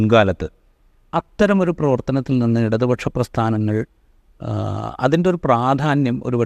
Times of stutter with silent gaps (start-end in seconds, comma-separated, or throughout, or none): none